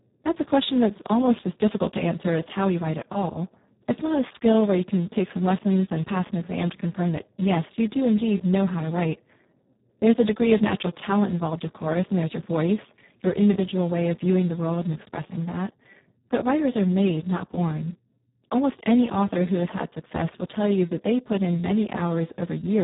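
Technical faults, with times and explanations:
Throughout, Speex codec: heavy coding damage leaves the speech hoarse, noisy and edging toward robotic, which points to a bitrate of about 4 kbps, where the CELP coder has too few bits to model the excitation. Nothing remains above 3.8 kHz, so the top band is absent entirely.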